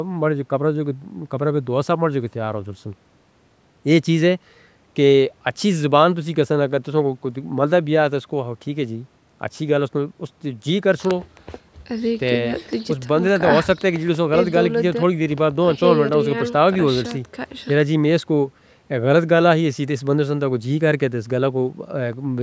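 No technical faults are audible.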